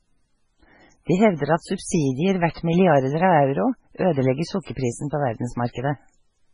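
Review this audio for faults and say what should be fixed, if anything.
MP3 compression runs through the whole speech clip: nothing remains above 10.5 kHz, and weak spectral lines flicker between frames, giving a watery, swirly texture with smeared consonant attacks. The heavy damage points to a very low bitrate, likely around 16 kbps. Encode at a higher bitrate or use a modern speech-capable codec.

Pre-echo sits from 2.52 to 2.56 s, a 42 ms hiss just before "milliarder av euro ødelegger". The codec spread quantisation noise meant for the loud onset across the quiet start of its block, softening the attack. Allow shorter transform blocks on transients and raise the bitrate.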